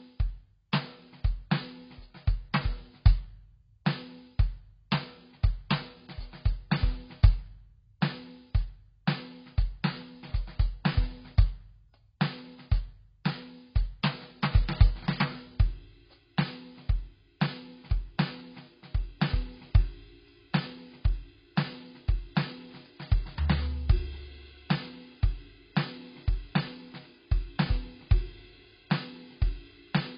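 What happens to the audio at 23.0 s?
At 23.0 s the music carries the same AAC compression damage heard throughout the clip. Nothing is present above 5.3 kHz, so the top end is simply gone and the sound is dull. The likely cause is AAC-LC coding squeezed to a very low rate, consistent with about 16 kbps. The encoder lowers its cut-off, drops or noise-fills weaker frequency bands, and leaves sustained tones smeared with a warbling, fizzy texture.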